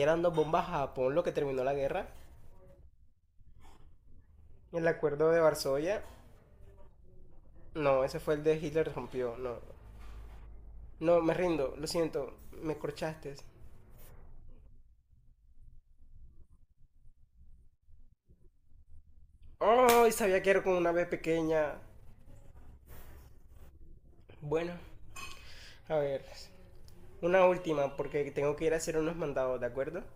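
From about 24.1 s to the end of the clip, the speech carries a steady buzz at about 43.1 Hz, the sign of a block size mismatch (truncated). One stage hands over blocks, which fits 1024-sample blocks at 44.1 kHz, and the next stage reads less than that, so the tail of each block is discarded and the cut repeats at the block rate. The speech keeps its normal pitch and runs at a speed ratio of 1.0, which separates this from a sample-rate mismatch.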